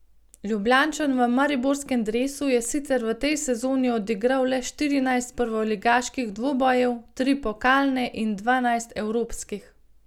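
No technical faults are audible anywhere in the speech.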